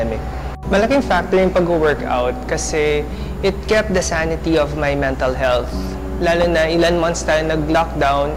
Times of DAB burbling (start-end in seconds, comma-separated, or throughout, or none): 6.41-6.44